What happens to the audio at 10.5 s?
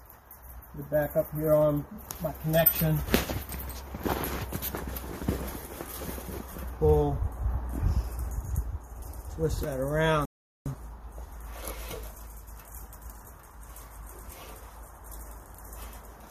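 At 10.5 s the audio is in the middle of a rebuffering stall. The sound drops to silence at 10.25 s and stays silent until 10.66 s. The player had used up all the audio it had downloaded, so playback halted while it waited for more data. When enough arrived, the sound picked up exactly where it had stopped. Nothing is skipped. The gap simply adds about 0.4 s to the running time.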